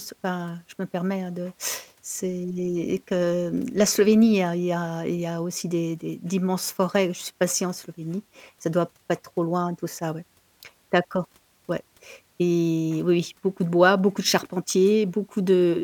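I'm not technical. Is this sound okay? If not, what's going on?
Yes, nothing in this recording stood out as a problem when I listened to it.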